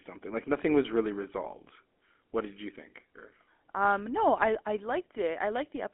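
Throughout the clip, the speech has passed through the GSM full-rate codec, the original mobile-phone coder, at a rate that fits its 13 kbps mode. It models the vocal tract and drives that model with a regular pulse train that keeps only every third excitation sample, so fine detail in the voicing is thrown away. The result is a plainly audible buzzy, gravelly roughness in the voice. The band is held to roughly 250 Hz to 3.4 kHz, leaving the audio thin and muffled.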